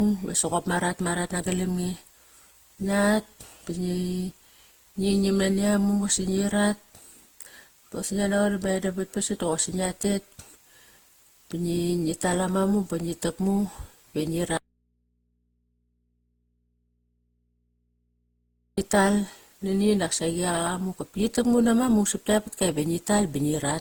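Throughout the speech, the signal was likely reduced to very few levels by plain rounding with no dither, which fits an 8-bit path. The rounding error tracks the speech, so quiet passages turn gritty with grainy distortion sitting roughly 35 dB below the signal.

Also throughout, the audio likely went through generation loss: decoded and re-encoded with a lossy codec many times, consistent with about seven passes of Opus at around 48 kbit/s. Each pass adds fresh quantisation, leaving the sound swirly, smeared and hollow, with blurred attacks.

From 14.57 s to 18.78 s comes an audio dropout to a faint residue. The signal was likely lost while the path after the break stayed live, so for about 4.2 s the speech cuts out abruptly and only mains hum remains, about 45 dB below normal level.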